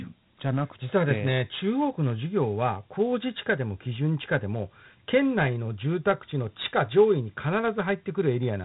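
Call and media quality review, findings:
Dialogic VOX ADPCM coding, full length of the speech clip. Band-limited: nothing above roughly 3.8 kHz, consistent with 8 kHz sampling. Plainly audible gritty hiss riding on the speech, level tracking the signal. Probable component: OKI-style 4-bit ADPCM encoder, consistent with 32 kbps. Mechanism: coarse 4-bit step-size quantisation of sample differences; the predictor lags fast transients, leaving granular noise that follows the speech envelope.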